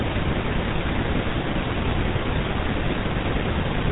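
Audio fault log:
Throughout, GSM full-rate codec: the speech was squeezed through the early GSM vocal-tract model, its excitation rebuilt from sparse regular pulses, which fits a 13 kbps GSM full-rate link. Everything above 3.8 kHz is gone, leaving a dull, buzzy, gravelly roughness.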